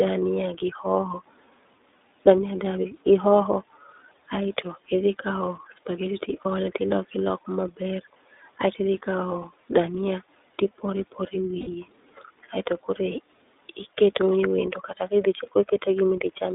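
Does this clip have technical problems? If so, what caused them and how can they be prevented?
Yes. The iLBC codec runs throughout: the sound is confined to a telephone band of roughly 300 Hz to 3.7 kHz, and each 30 ms frame is coded on its own at a rate that fits 13.33 kbps, leaving a plainly audible rough, synthetic edge on the speech. Nothing above about 3.7 kHz survives, so sibilants and brightness are gone. Preventing it means carrying the call over a wideband codec such as Opus or G.722 instead of narrowband iLBC.

Lost iLBC frames occur twice: a 30 ms gap at 6.42 s, just before "ole ti loko loko", and a 60 ms gap from 11.60 to 11.68 s, just after "kawo dhania tipore pore". In each, the decoder filled the missing frames by repeating the last pitch cycle blended with noise, giving a brief held, buzzy vowel. Since iLBC frames don't depend on their predecessors, the speech recovers immediately afterward. 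Reducing packet loss through a more reliable network path, a jitter buffer, or forward error correction would prevent these dropouts.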